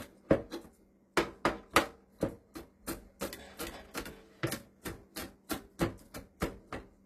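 Throughout the clip, the top end sounds bright but gritty and metallic, with nothing above about 14.9 kHz. This is likely HE-AAC compression, which fits a stream near 24 kbps. Unlike a plain low-pass cut, the treble isn't dull. It's rebuilt from copied lower bands whose harmonics don't line up.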